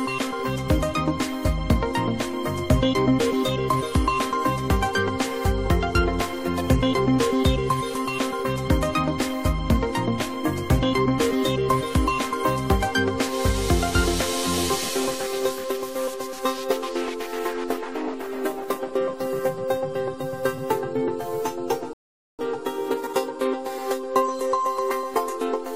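At 21.93 s the audio drops into silence and stays there until 22.39 s, a rebuffering stall of about 0.46 s. The player ran out of downloaded data and waited for more to arrive. When it resumes, it picks up at exactly the point where it stopped. That sets it apart from a dropout or packet loss, where a stretch of the material goes missing. Here nothing is skipped; the gap simply adds time.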